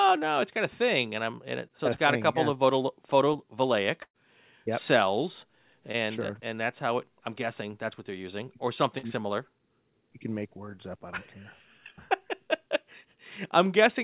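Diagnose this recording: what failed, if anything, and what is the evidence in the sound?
Short concealed packet loss occurred at the network stage, with the receiver's concealment patching the holes. About 20 ms went missing at 1.68–1.71 s after "I'm in it", at 3.33–3.36 s, and at 5.92–5.97 s between "yep cells" and "sure and that's how". About 40 ms went missing at 8.98–9.05 s after "what they're using or". Each gap was filled by extending the preceding sound, heard as a brief smear or wobble.

A burst of packet loss, also a network fault, removed about 120 ms at 4.02–4.16 s. The receiver continued the last sound and faded it, leaving roughly 60 ms of silence before the speech resumes further along, with the intervening portion gone.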